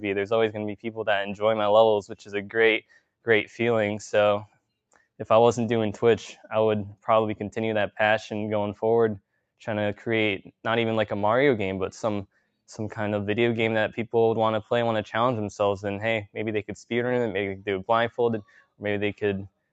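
Throughout the clip, a noise suppressor built for speech stays active on this sound. It treats sustained tones and decaying tails as noise and pulls them down, so the level swings by around 5 dB and pumps. On a waveform the envelope breathes unevenly, and on a spectrogram held partials fade in patches while onsets stay bright. The whole band stops at 8 kHz, as expected from the call path.

Six sounds are cut by the noise suppressor: 0.74–1.02 s, 2.05–2.55 s, 2.81–3.27 s, 4.45–4.64 s, 12.29–12.51 s and 18.42–18.83 s. Each dips by about 16 to 19 dB. These show as sudden notches in the waveform and as darker patches on the spectrogram.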